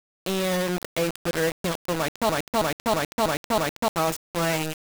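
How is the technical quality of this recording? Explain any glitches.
Pretty rough, honestly. There are two clear problems. Throughout the speech there's harsh grainy distortion, likely from rounding to about 3 bits without dither, leaving the error only about 10 dB below the voice. Then from 2.29 to 3.88 s there's a broken-record loop, a 0.32 s snippet repeating five times back to back, likely a stalled stream resending its last fragment, so the audio from that stretch is gone.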